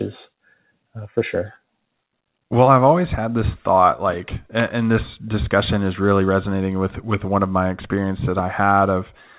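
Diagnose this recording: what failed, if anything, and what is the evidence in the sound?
Nothing in the recording has failed: the speech arrives through a WebRTC call path carried as G.711 mu-law at 64 kbps, so the spectrum stops at 4 kHz as that narrowband telephone codec dictates, and no stage of the chain shows a fault in the sound.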